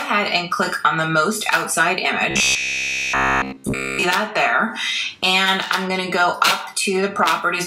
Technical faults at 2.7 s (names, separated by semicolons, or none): robotic sound from repeated short buffers